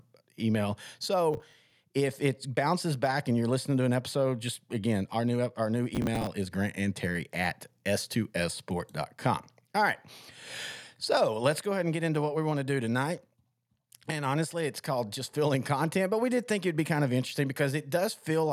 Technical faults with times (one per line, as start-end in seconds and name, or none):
1.34-1.71 processor overload crackle
5.95-6.27 processor overload crackle